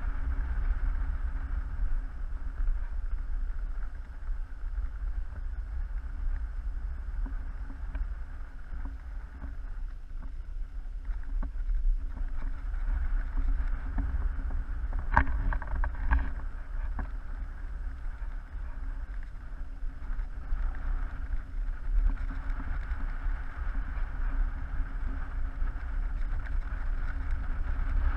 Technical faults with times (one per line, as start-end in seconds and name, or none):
none